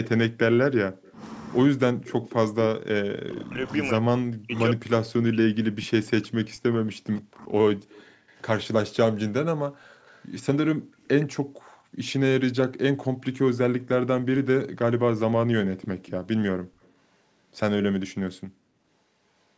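From 0.05 to 1.12 s a faint copy of the speech trails it by 120 ms, about 20 dB down. This is an echo leak, likely a loudspeaker echo the far-end canceller failed to remove. It returns at 2.08–2.34 s, 3.39–3.43 s, 7.99–8.41 s, 9.9–11.26 s and 15.81–16.92 s, at about 20 to 35 dB below the speech.

Between 1.7 and 8.02 s the talker's own level dips and cuts out in pieces for about 5 s in total, dropping by up to about 40 dB. This is speech suppressed in double talk, with the canceller likely turning down both its own talker and the loudspeaker echo. Unlike the echo, nothing is added. The main speech itself gets weaker or disappears.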